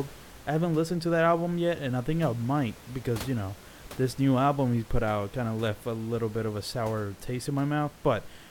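No technical faults can be heard in this recording.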